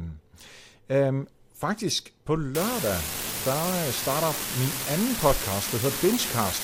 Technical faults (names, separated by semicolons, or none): unreliable data bit